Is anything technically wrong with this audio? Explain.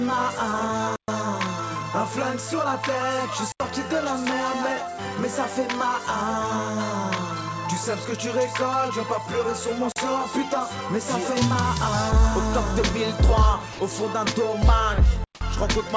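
Yes. Two kinds of fault break up the sound.

Blocks of digital silence occur at 0.96 to 1.08 s (120 ms), 3.52 to 3.60 s (80 ms), 9.92 to 9.96 s (40 ms) and 15.24 to 15.40 s (160 ms). Each time, zeros went out in place of the audio, likely because the output buffer was left unfilled. With no fade on either side, the audio drops straight to dead silence and jumps back. The blocks open audible holes in the sound.

At 13.73 to 13.79 s, about 60 ms of sound is replaced by steady, featureless noise. This is most likely sound dropped by the voice detector: the sending side judged that stretch to be background and stopped transmitting, and the receiver filled the gap with comfort noise. The audio turns into an even hiss for that moment, then resumes once the detector triggers again. This replacement carries through the call path, whose band ends at 8 kHz, consistent with a wideband codec such as G.722.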